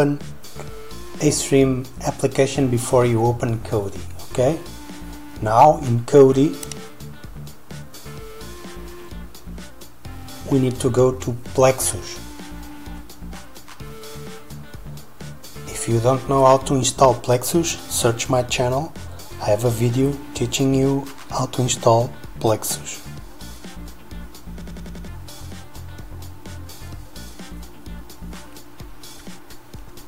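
At 24.61 s the sound hits a system hang loop that runs to 25.08 s. A roughly 93 ms slice repeats exactly, five times, at about 10.8 Hz, so you get a machine-gun stutter rather than a buzz. The machine or driver stalled while the audio hardware kept replaying its ring buffer, and the loop length fits a 4096-sample buffer. About half a second of real audio never made it through.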